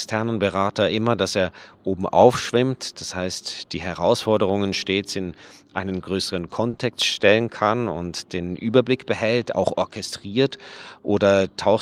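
Just after "stets in einen größeren", at 6.69 to 6.75 s, a sound hangs on too long with a faint buzz or dip. This is a short stall from a late packet: the jitter buffer ran dry, so the receiver stretched the last sound by 40 ms and resumed without losing anything, adding 40 ms of delay.

Moments later, at 6.77 to 6.81 s, there is a brief smear. This short concealed packet loss left 20 ms of audio missing, and the receiver filled the gap by extending the preceding sound before blending back into the real signal.

After "behält auch orchestriert", from 11.09 to 11.41 s, the speech sounds hurried at unchanged pitch. This jitter buffer speed-up runs the audio at 110% to shed excess buffered delay, repeatedly cutting pitch-period-sized slices, around 40 ms in total.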